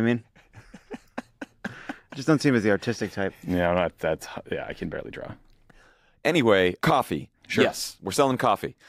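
No technical fault can be heard anywhere in the audio. Nothing in the sound calls for a time, a value or a cause to be pointed out.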